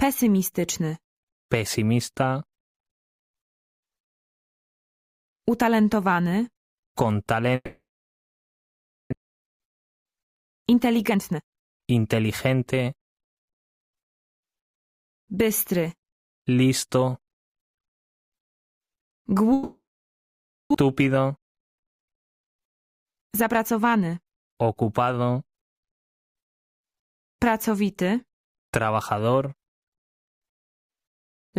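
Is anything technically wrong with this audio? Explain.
Yes, there are two kinds of problem, each happening twice.

The first is a long network dropout, at 7.55 to 9.14 s and again at 19.53 to 20.76 s. The stream most likely stopped arriving for a while. The receiver stretches the last bit of sound into a fading buzz, and for most of each gap (about 1.3 s the first time, 0.9 s the second) there's just silence. When the audio returns, roughly a second of material is simply gone.

The second is a jitter buffer speed-up, after each gap: 9.23 to 13.58 s at 112% speed, then 22.68 to 24.38 s at 108%. The late audio piled up in the buffer, adding roughly half a second of delay the first time and about 150 ms the second. The receiver works that off by repeatedly snipping out tiny pitch-period-sized slices. The pitch stays put, but the sound feels noticeably rushed until it catches up.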